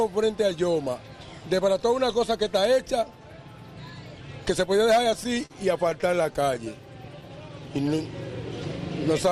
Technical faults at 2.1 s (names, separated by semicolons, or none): none